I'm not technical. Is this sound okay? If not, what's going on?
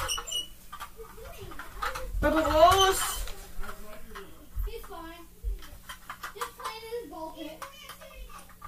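No. The clip has overlapping chunks: the audio was handled in 3-second pieces, each starting about 7 ms before the previous one ended. That sliver plays twice at each join, at 4.29 s and 7.30 s, giving a brief click or stutter.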